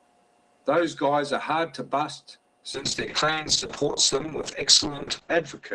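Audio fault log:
2.74–5.75 s: call bitrate drop. The speech turns rough and watery, and the top end is cut from 20 kHz to 8 kHz. This fits the encoder falling from 32 to 7 kbps. The worst stretch lasts about 2.2 s, with no recovery before the end.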